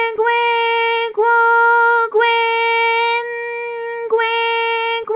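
No technical faults can be heard in this audio.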